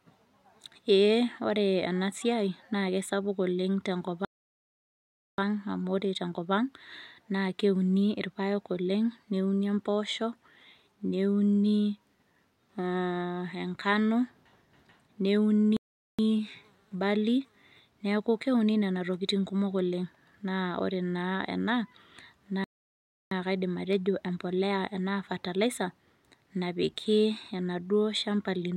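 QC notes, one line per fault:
4.25–5.38 s playback stall: speech halts mid-flow into about 1.13 s of silence, likely the player starving for data; far longer than a brief dropout click.
15.77–16.19 s playback stall: output goes silent for about 0.42 s, likely a blocked playback thread; a clean full gap, not a stutter or repeat.
22.64–23.31 s playback stall: a silent gap of about 0.67 s cuts the speech mid-flow, likely buffer underrun in the player rather than a recording-side cut.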